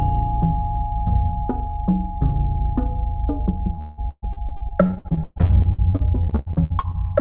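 Repeated packet loss, with a robotic sound, runs from 3.74 to 6.96 s. Across this stretch the audio breaks into roughly thirty short holes, the longest about 175 ms. Each hole is bridged by stretching out the sound just before it, and the next dropout follows almost immediately. About 38% of the span is this patched-in material, which gives the choppy, robotic texture with fragments missing. The whole clip also shows the narrow band of a G.711-style call codec, with nothing above 4 kHz.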